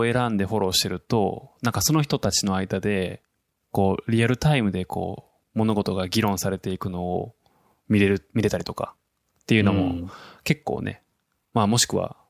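No technical faults are audible anywhere in the speech.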